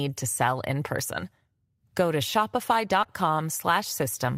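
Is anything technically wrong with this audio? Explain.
Yes. At about 3.03 to 3.07 s the speech briefly smears and wobbles, a short concealed packet loss. Roughly 20 ms of audio arrived too late to decode, so the receiver extended the preceding sound for about 14 ms before blending back into the real signal.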